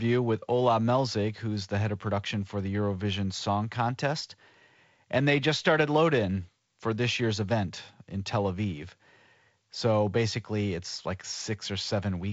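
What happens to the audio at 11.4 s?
Nothing goes wrong at 11.4 s; the speech carries on intact through that moment, with only the light hiss of the G.722 wideband telephone coding and no content above about 7.8 kHz, as throughout.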